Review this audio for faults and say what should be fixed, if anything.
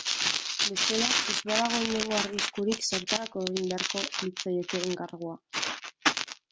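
Nothing here needs fixing; I listened through the speech and didn't catch any technical faults at all.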